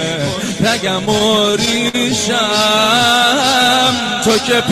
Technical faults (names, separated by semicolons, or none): repeated stalls (stutter)